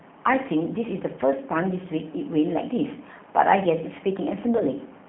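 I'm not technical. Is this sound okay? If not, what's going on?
No. The whole clip sounds narrow and phone-like, slightly rough and synthetic. That's the G.729 codec, a low-data internet phone format that rebuilds the voice from a simplified model of it and drops everything above about 3.4 kHz, which takes away the crispness.

Near the end, from 4.57 to 4.63 s, the voice briefly turns smeared, then fades and stays weak for a moment. That's VoIP packet loss concealed by the speech codec. About 30 ms of audio went missing in transit, and the decoder filled the gap by stretching out the last sound it had.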